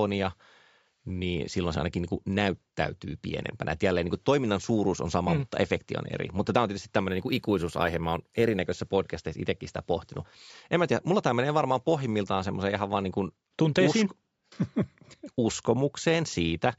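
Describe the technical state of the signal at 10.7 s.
At 10.7 s the speech signal is intact, with no dropout, distortion, glitch or other fault audible at that moment.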